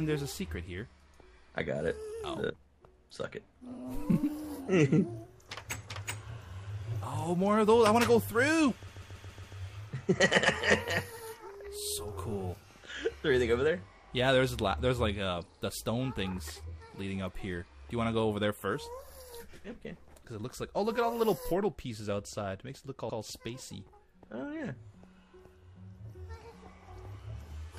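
From 4.12 to 4.15 s there is a brief stutter: a 24.7 ms slice plays twice. From 8.87 to 9.56 s a 139.3 ms block plays five extra times, a rapid looping stutter that stretches the audio by about 0.7 s. From 23.08 to 23.18 s an 85.6 ms block repeats once. All three are repeated frames, where a run of compressed frames was stored or sent more than once and the decoder replays it.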